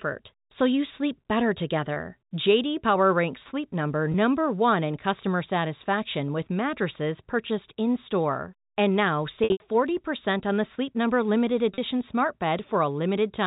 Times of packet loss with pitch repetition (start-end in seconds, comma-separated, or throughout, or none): 1.94-1.96, 4.12-4.14, 9.44-9.60, 11.74-11.78